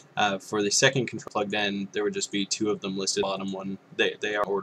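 The audio jumps abruptly forward at 1.28 s, 3.23 s and 4.44 s, losing roughly 0.7 s, 0.4 s and 0.2 s respectively. These are compressed frames skipped: whole blocks of encoded audio were dropped or rejected by the decoder, consistent with frames of about 93 ms.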